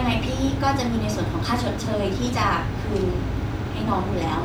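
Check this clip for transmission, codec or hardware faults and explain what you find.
No faults can be heard anywhere in this recording.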